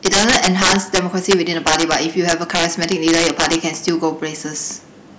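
Integer overflow runs through the whole speech clip: driven about 10 dB too hot, roughly one percent of samples wrap to the opposite sign, producing violent cracks on loud syllables.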